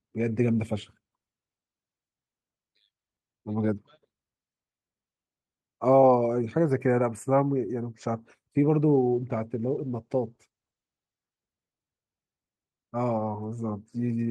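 From 8.88 to 11.33 s, a call bitrate drop starves the encoder, consistent with 48 falling to 16 kbps, so speech turns coarse, watery and muffled.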